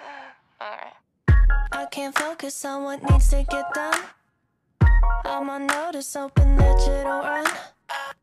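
No technical faults can be heard anywhere in the recording; the signal holds steady throughout.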